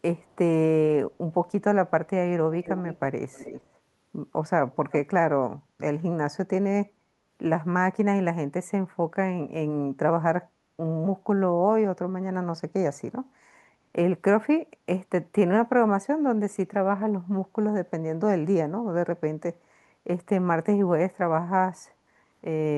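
Speech with echo leak: a barely audible copy trails the voice by 253 ms at 0.21–0.36 and 1.13–1.17 s, then louder copies, only some 10–15 dB down, lag 311 ms at 2.6–3.0, 3.32–3.78 and 4.74–4.95 s. The likely cause is a far-end loudspeaker whose echo canceller let sound through. On a spectrogram these appear as faint, right-shifted duplicates of the harmonic bands.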